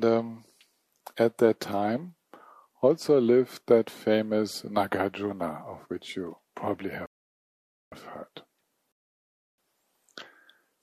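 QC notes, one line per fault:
7.06–7.92 s and 8.92–9.58 s, rebuffering stall: playback drops to silence twice, for about 0.86 s and then 0.66 s, and resumes exactly where it stopped. The player ran short of downloaded audio and waited for more, so no sound is lost but time is added.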